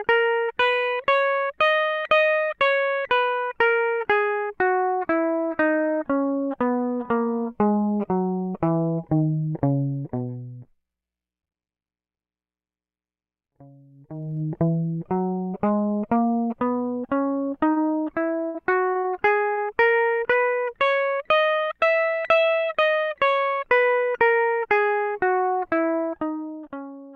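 From 13.90 to 14.42 s there's zipper noise: a level change of roughly 25 dB lands in coarse steps, around 150 a second, instead of gliding, so the music picks up a ticking buzz while it moves.

At 17.71 s comes a short stall from a late packet. The jitter buffer ran dry and the receiver held the last bit of music for 48 ms until the packet showed up, so you hear a brief smeared hang with nothing lost.

Between 18.48 and 19.07 s, repeated packet loss gives that robotic sound. Five separate holes get patched by stretching what came before, about a quarter of the stretch is patched, and roughly 60 ms of music is gone, the longest gap 61 ms. It comes across choppy.

A second late-packet stall at 19.52 s holds the music for 51 ms, the same smeared hang as before.

From 22.55 to 23.04 s there's a jitter buffer speed-up. The buffer had built up extra delay, so tiny pitch-period slices, roughly 70 ms in all, were cut out. 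The music runs at about 112% speed with pitch unchanged, and the tempo briefly rushes.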